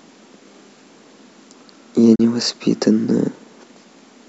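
At 2.15 s the speech cuts out in a digital broadcast dropout, returning by 2.20 s. A brief 8 ms fade leads into a 32 ms hole, which fits one frame failing its checksum and the receiver muting until valid data resumed. That stretch of audio is lost.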